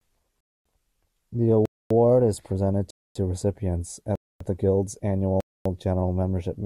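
Right from 0.41 s the speech keeps dropping into hard-edged silences: a gap between chunks at 0.41–0.65, 1.66–1.91 (just before "is presented"), 2.91–3.16 (right after "is presented"), 4.15–4.40 and 5.40–5.65 s (just ahead of "general membership"). Each hole is 250 ms, recurring every 1.25 s, which fits 1-second chunks being played with dead air stuck between them. Nothing's missing, but the flow stops and restarts abruptly at every join.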